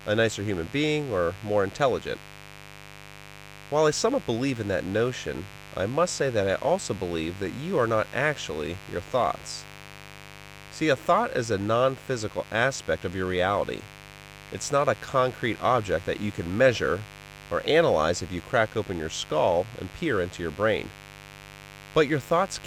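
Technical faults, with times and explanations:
Throughout, mains buzz: interference from 50 Hz mains enters the signal path, adding a steady raspy buzz about 20 dB below the speech.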